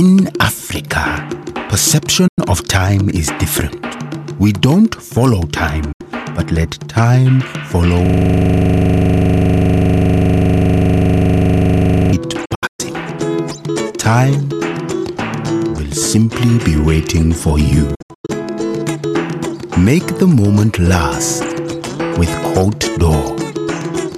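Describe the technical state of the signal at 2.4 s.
At 2.4 s the signal has just recovered from a digital broadcast dropout spanning 2.27 to 2.39 s. The receiver stopped getting valid frames and muted. The sound fades out over about 8 ms, leaving a 96 ms hole, which fits four lost frames.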